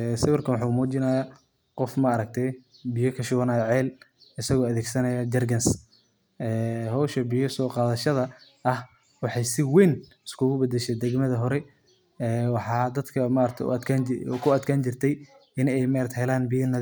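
No faults are audible in this speech recording; nothing calls for attention.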